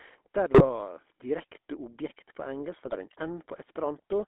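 Speech heard throughout through the GSM full-rate codec. Its buzzy, gravelly roughness comes from the vocal-tract model being driven by a sparse, regularly spaced pulse excitation, and the band is held to roughly 250 Hz to 3.5 kHz, which fits the 13 kbps full-rate coder. A plain narrowband telephone filter would sound dull but smooth. This codec damage is plainly audible as a grainy rasp laid over the voice itself.

GSM bit errors strike twice. From 0.54 to 0.69 s, just before "direkte objekt på engelsk", the sound breaks into squawks and gargling, and again from 2.86 to 2.95 s, right after "direkte objekt på engelsk". Corrupted filter, pitch and gain values distort the spectrum or jolt the level frame after frame while the bad patch lasts. That separates these bursts from packet loss, which leaves gaps or smeared repeats rather than harsh, misshapen sound.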